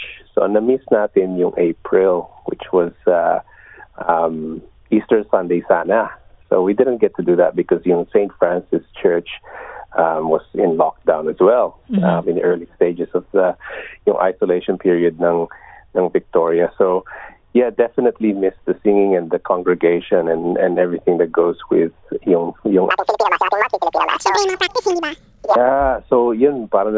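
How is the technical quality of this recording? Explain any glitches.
One clear glitch spoils the recording near its end. From 22.91 s to 25.55 s there is a wrong sample rate fault. The samples are played back faster than they were captured, with no conversion between the two rates. Here the ratio is 2, which fits audio recorded at 8 kHz being played at 16 kHz. Speed and pitch rise together. The sound runs at double speed and jumps up a full octave, 12 semitones. It comes across as high and hurried.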